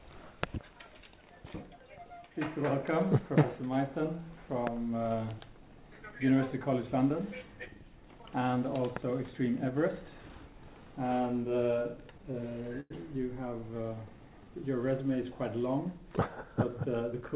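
The audio arrives band-limited to 4 kHz by a call path whose coding noise fits G.711 A-law at 64 kbps. From 4.04 to 7.08 s a loudspeaker feedback squeal appears: a steady 6.3 kHz tone swells over roughly a second and a half to about 10 dB above the signal, because the microphone is picking up its own loudspeaker with loop gain above one at that frequency. Between 11.66 and 12.92 s there are repeated stalls (stutter). In 11 gaps, the longest 98 ms and 200 ms in total, the receiver extends the last sound while its empty jitter buffer waits for late packets, so the audio drags without losing content. A jitter buffer slow-down from 13.71 to 14.50 s stretches the audio to 89% speed at unchanged pitch, adding 96 ms of repeated pitch periods to rebuild the buffer reserve. A jitter buffer speed-up from 16.50 to 17.29 s runs the audio at 108% speed with pitch intact, trimming roughly 70 ms of short pieces to reduce excess buffered delay.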